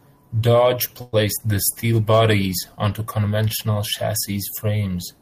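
A call audio freeze runs from 1.01 to 1.15 s: the last sound is stretched into a fading buzz or hiss for about 114 ms, then the speech resumes where it stopped with nothing lost, running 114 ms later. Packets were likely delayed, starving the jitter buffer.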